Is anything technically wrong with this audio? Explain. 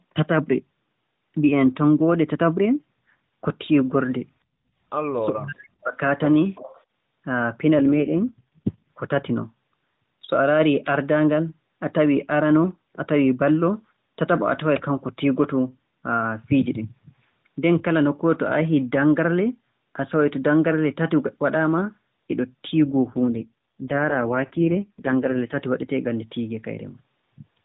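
Yes, there are three kinds of fault.

From 5.3 to 6.0 s the speech dips sharply, by about 40 dB at its deepest, for roughly 0.7 s. This is speech suppressed in double talk. The likely cause is an echo canceller that mistook simultaneous talk for loudspeaker echo.

From 6.55 to 6.83 s, a faint copy of the voice follows 364 ms behind, about 20 dB below the speech. This is an echo leak, likely with residual loudspeaker pickup sent back. Its fixed delay separates it from room reverberation, which smears sound continuously instead of repeating it.

From 7.78 to 8.89 s and from 22.85 to 25.58 s, the voice turns buzzy and synthetic. This is an AMR rate drop from 12.2 to 4.75 kbps, which leaves fewer bits for the vocal-tract model. The bandwidth stays the same and nothing cuts out, unlike packet loss.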